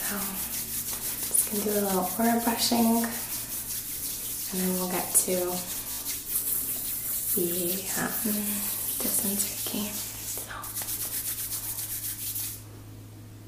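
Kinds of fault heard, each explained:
Repeated buffer: fresh audio reached the output too late, so the device replayed the block it already held. A slice about 20 ms long, which fits a 20 ms buffer, repeats with hard joins. At 5.92 s it plays three extra times, a buzzy stutter costing roughly 70 ms. At 9.52 s and 11.76 s it repeats once, a brief click. Waveforms show identical segments butted together; spectrograms show thin vertical lines at each seam.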